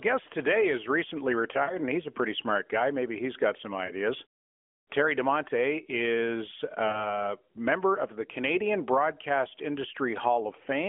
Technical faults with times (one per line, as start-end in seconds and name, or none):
1.64-1.78 lost AMR speech frames
3.86-3.93 lost AMR speech frames
6.88-7.18 lost AMR speech frames